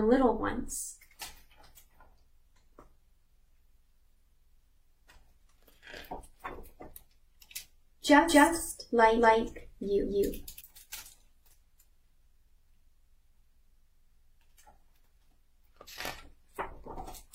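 From 8.29 to 10.61 s the sound runs twice: a doubled audio track, with a full-band copy about as loud as the original trailing roughly a fifth of a second behind, likely from a second, slower capture path. Unlike an echo, it neither decays nor carries room colour, and it cuts in and out abruptly.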